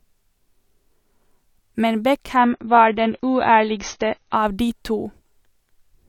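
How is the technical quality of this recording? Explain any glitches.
The speech carries one clear glitch, a temporary drop in stream quality. Adaptive stream at a lower bitrate, from 2.36 to 4.36 s, starting just before "de to": the player switched to a leaner encoding of the same speech, probably because the connection slowed, then switched back. For those two seconds nothing is audible above 6.6 kHz, so sibilants lose their crispness, and compression artefacts rise. The change arrives and leaves abruptly, with no gap, which fits a jump from roughly 128 kbit/s MP3 down to about 24 kbit/s.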